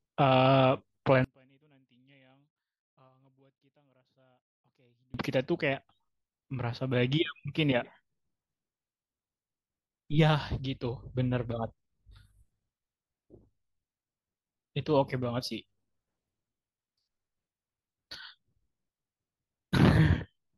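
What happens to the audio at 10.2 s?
Nothing goes wrong at 10.2 s; the speech carries on intact through that moment, with no dropout, click, glitch or change in level.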